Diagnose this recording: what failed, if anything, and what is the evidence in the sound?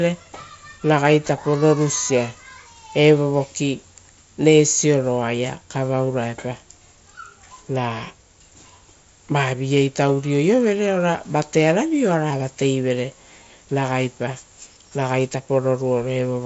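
Nothing in the signal chain has failed: the speech comes through the Bluetooth mSBC headset codec as expected, with a wideband response reaching up to about 8 kHz and only the light graininess that codec adds on louder passages.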